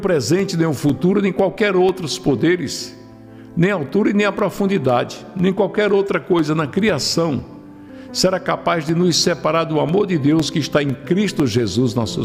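A regular tick or tiny pop recurs every 0.5 s from 0.39 s to 11.9 s, around twenty in all, audible only while sound is present. These are periodic USB or driver dropouts: something stalls the audio path at a fixed interval, and each time about a millisecond of signal is replaced by silence.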